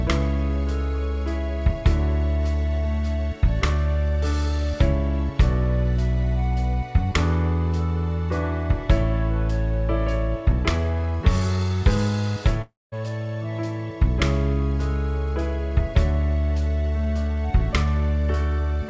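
At 12.62 s the sound smears into a fading buzz, then silence until 12.94 s, likely a long network dropout, appearing as a flat, blank gap.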